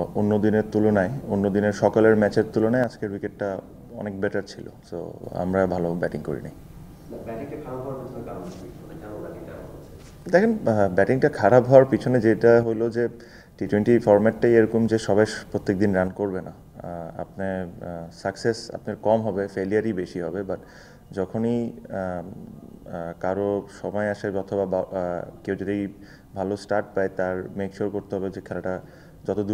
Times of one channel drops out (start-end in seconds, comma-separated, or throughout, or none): 2.84-5.24, 12.63-13.66, 16.08-29.54